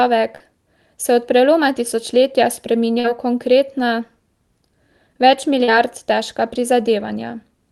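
Brief smears or wobbles in the speech at 0.35–0.43 s, 3.00–3.07 s (after "se od preloma tisočletja", before "v konkretna") and 5.64–5.70 s mark short concealed packet loss: about 40 ms of audio arrived too late each time. The receiver bridged each gap by extending the preceding sound, below the call codec's 12 kHz ceiling.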